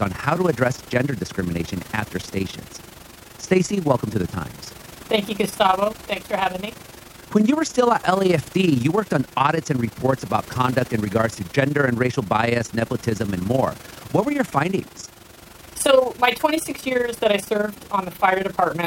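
Overlap-add ripple runs through the whole speech clip, a rough flutter around 20 Hz with level swinging about 11 dB, seen as evenly spaced amplitude dips and vertical striping.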